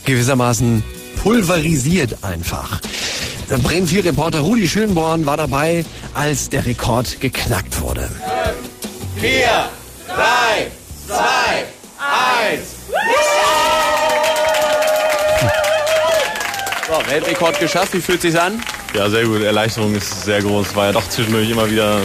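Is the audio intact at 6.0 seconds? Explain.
No. At 6.0 s the audio is inside a call bitrate drop running from 1.1 to 8.77 s. The encoder has been starved of bits, and the sound points to a fall from about 64 to 13 kbps. The coarse coding and trimmed highs make it rough and muffled.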